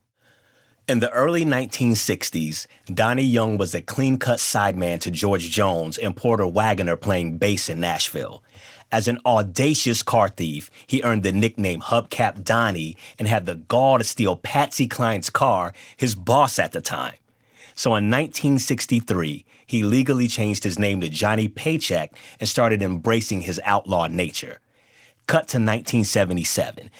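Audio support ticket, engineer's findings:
No faults found in this speech recording. Opus voice compression is audible only as light coding texture, with full band retained, which fits hybrid mode at around 24 kbps.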